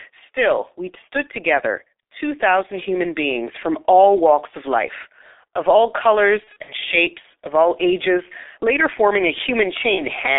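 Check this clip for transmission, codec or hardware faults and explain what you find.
Two kinds of fault are present: low-bitrate codec damage across the whole recording, and packet loss concealment at two points in the speech.

G.723.1 codec, throughout: The speech is confined to a telephone band of roughly 300 Hz to 3.7 kHz and carries heavy coding damage, which fits G.723.1 at about 6.3 kbit/s. The codec models the voice in 30 ms frames and its spectral model trails fast changes, so consonant transitions smear. The result is a muffled, hoarse voice with indistinct consonants and no high-frequency content.

VoIP packet loss concealed by the speech codec, 6.44 to 6.74 s and 9.95 to 10.05 s: In the first event, about 120 ms of audio is missing, scattered over roughly 240 ms, with the longest gap around 60 ms. This points to four dropped 30 ms frames. The second event is a single 30 ms gap. 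The decoder fills each gap by repeating its last pitch and filter settings at decreasing gain. This produces a brief buzzy tone or coloured noise that fades, in place of the speech. Because each frame depends on the previous one, the voice stays weak or distorted for a short time after packets resume.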